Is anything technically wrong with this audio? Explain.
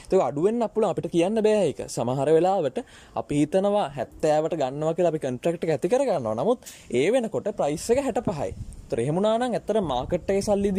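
No, nothing technically wrong is audible here.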